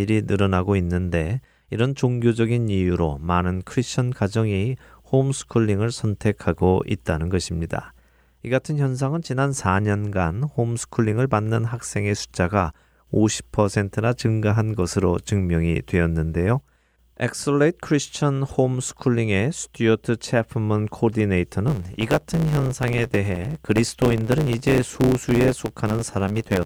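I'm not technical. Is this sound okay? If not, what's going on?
No. From about 21.67 s to the end at 26.66 s, the speech picks up a steady buzz at 100 Hz and starts running about 1.09 times too fast. This is a block size mismatch (truncated): one stage hands over chunks of audio slightly longer than the next stage accepts, so the tail of each chunk is chopped off. Unlike a simple speed-up, the voice's overall character stays about the same.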